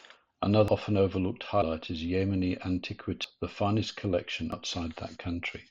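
The speech jumps four times, at 0.68 s just before "often overlooked", at 1.62 s right after "often overlooked", at 3.24 s, and at 4.52 s after "the finest". Each one is an abrupt skip forward with no gap of silence, which points to a likely dropped buffer (overrun): samples were overwritten before being read, and the two ends got spliced together. About 0.1 to 0.15 s disappears at most of them, and roughly 0.3 s at 3.24 s.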